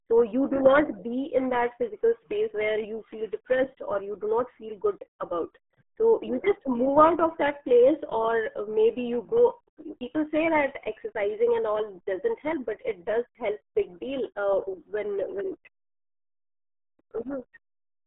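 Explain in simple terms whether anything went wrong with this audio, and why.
From start to finish, the speech passed through the RealAudio 14.4 codec. It removes everything above 3.8 kHz, leaving the speech muffled and gargly.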